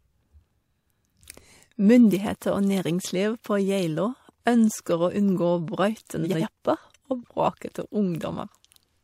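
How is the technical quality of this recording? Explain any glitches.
The recording has one audible glitch.

Frames out of order, 6.23 to 6.43 s: two neighbouring blocks of 85.3 ms each (which fits runs of two codec frames apiece) were decoded in swapped order. The speech there plays with its halves exchanged, a garbled flutter, and no time is lost.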